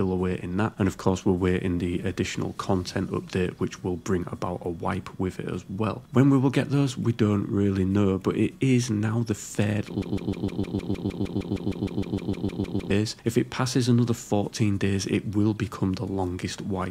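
A stall in the player, encoder or stream is the likely cause of the broken-record loop from 10.02 to 12.91 s: the chain stopped getting fresh audio and kept replaying the last fragment it held. That fragment, about 154 ms long, repeats exactly and back to back 19 times, giving a rapid, mechanical stutter that sounds like a stuck record. Whatever should have played during those nearly three seconds is missing.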